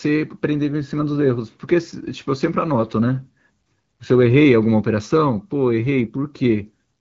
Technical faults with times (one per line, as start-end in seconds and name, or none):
none